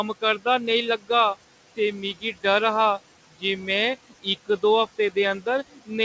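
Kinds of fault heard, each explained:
Noise suppressor artifacts: The suppressor estimates the steady background and attenuates each frequency band it classifies as noise, updating frame by frame. Here it pulls the room noise, which sits about 17 dB below the speech, down by about 15 dB in the gaps. The residue rises back under the speech and falls away between phrases, so the background pumps with the talker.
Speech cut by the noise suppressor: Near the end, from 5.74 to 5.91 s, the suppressor mistakes part of the speech for noise and turns it down with the background, by about 14 dB at the deepest point. Around a tenth of a second of that stretch is affected, so the quiet speech there sounds swallowed and faint. The band-limited sound, with nothing above 8 kHz, points to a G.722 call codec running at 64 kbps.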